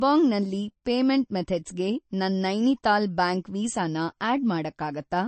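Throughout, the speech sounds watery and swirly, with nothing above 8.3 kHz. This is likely heavy MP3 compression, which fits a bitrate near 35 kbps.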